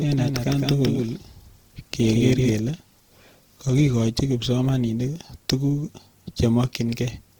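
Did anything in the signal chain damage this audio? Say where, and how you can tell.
Yes. Throughout the 7 s of speech, the codec stage shows grainy, rough texture, most likely Opus compression in its music mode at a low rate, around 16 kbps. A spectrogram shows bands kept full with noise-like fill instead of holes, extending to about 20.4 kHz.

From the start until 2.52 s, a doubled audio track is audible: a full-band copy about 5 dB quieter trails roughly 150 ms behind, with no room colour, likely from a second capture path or editing. The waveform shows each onset repeated, then the echo cuts off abruptly.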